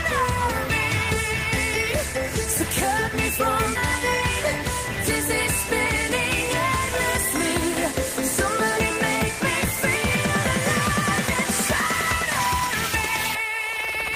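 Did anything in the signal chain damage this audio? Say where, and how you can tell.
Yes: in the network or at the jitter buffer, a skip ahead at 3.75 s discards about a second of audio, so playback jumps straight forward with no gap.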